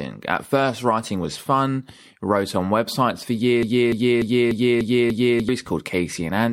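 At 3.63 s the speech locks into a broken-record loop: a fragment of about 0.29 s plays six times back to back until 5.49 s, with whatever should have been heard in that stretch simply gone. The likely cause is a stalled player or stream that kept re-sending the last chunk it held. On a waveform the span shows identical repeating blocks; a spectrogram shows the same short pattern tiled at even 0.29 s intervals.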